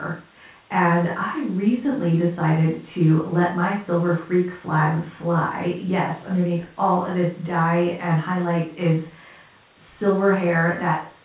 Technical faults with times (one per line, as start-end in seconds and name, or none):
none